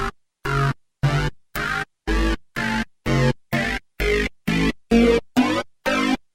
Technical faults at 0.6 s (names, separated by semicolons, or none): none